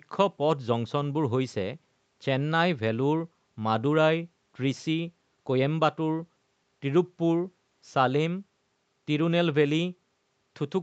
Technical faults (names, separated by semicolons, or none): none